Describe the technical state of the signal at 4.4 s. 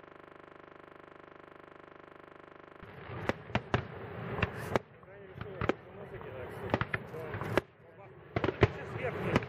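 At 4.4 s the signal is intact, with no technical fault present.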